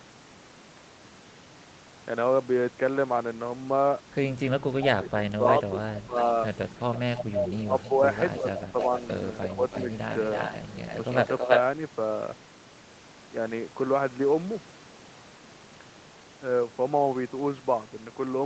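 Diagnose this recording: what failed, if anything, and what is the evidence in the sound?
Speech suppressed in double talk at 4.79–6.16 s, 7.43–8.02 s and 8.4–8.75 s. The call processing likely ducked the talker, leaving waveform dips of up to about 15 dB.

Echo leak at 5.98–6.22 s, 6.94–7.89 s, 8.35–8.85 s and 9.43–11.6 s. A likely uncancelled loudspeaker copy trails by 0.32 s at about 5–15 dB below, showing as duplicated spectrogram patterns.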